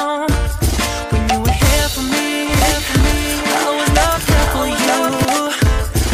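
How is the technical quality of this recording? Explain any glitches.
The recording has one glitch. From 2.49 to 5.25 s there is a doubled audio track: a second, full-band copy of the sound runs about a second behind the original and a few decibels quieter, around 5 dB down. It is likely caused by the signal being captured twice through paths with different latency. The copy is dry, with no decay or room colour, and it starts and stops abruptly at those two times.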